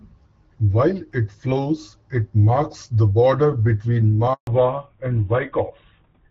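Speech, carried at first over a wideband call path whose sound fits AMR-WB at 12.65 kbit/s, with light codec colouring. At 4.33 s there is a handover gap. The call switches from one network to another, and no speech frames arrive during the switch. The voice fades within a few tens of milliseconds. Silence follows for 140 ms, until 4.47 s. Whatever was said in that stretch is lost. From 4.47 s to the end comes a fallback to narrowband. The new link carries a narrowband codec, and its sound fits GSM full rate at 13 kbit/s. Nothing above 4 kHz survives. The upper band that the wideband path carried up to 7 kHz is gone. The voice turns duller and rougher for the remaining seconds.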